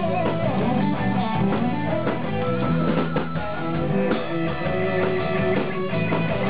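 No technical faults can be heard in this clip. There is nothing in the audio that calls for comment.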